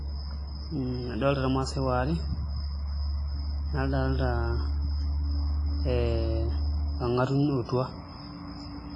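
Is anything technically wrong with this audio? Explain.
Yes, there is one fault, present throughout the speech.

From start to end the clip shows heavy WMA compression damage, likely from a low-rate encode that fits a bitrate around 24 kbps. This transform codec has discarded everything above 10.7 kHz and zeroed weak spectral detail, leaving a ringing, washy sound with quantisation hiss that breathes with the speech.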